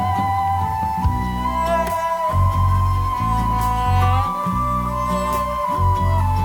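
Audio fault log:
throughout, low bit depth without dither: the music was likely rounded to about 6 bits with no dither, so the error follows the signal as grainy distortion roughly 30 dB down, gritting quiet passages.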